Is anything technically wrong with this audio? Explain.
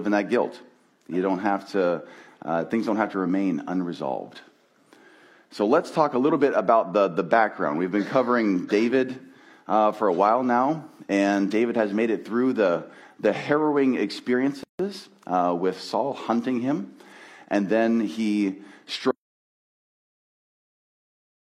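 Yes. At 14.63 s there is a gap at a join of encoded pieces, lasting about 159 ms to 14.79 s. Two separately encoded segments were butted together untrimmed, so one encoder's start-up delay and the other's final-frame padding both remain as silence. The sound stops and then resumes exactly where it left off. On a waveform this shows as a brief flat stretch with softened, codec-smeared edges, and a spectrogram shows a thin vertical blank band.

From 19.11 s to the end the audio drops out to silence, lasting about 2.3 s. Sound cuts off mid-flow and never returns, and no room tone remains underneath. This is likely a lost input, such as a disconnected device, a failed link or an accidental mute, while recording carried on writing silence. The waveform collapses to a flat line and the spectrogram goes empty across all frequencies through the final seconds.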